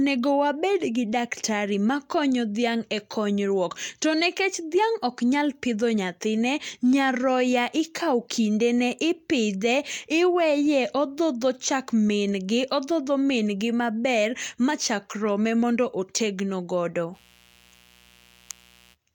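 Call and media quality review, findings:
Mains buzz, 17.12 to 18.96 s: raspy 60 Hz buzz about 30 dB under the speech. Switching spikes from a dimmer, rectifier or bad shield are stacking harmonics into kilohertz range.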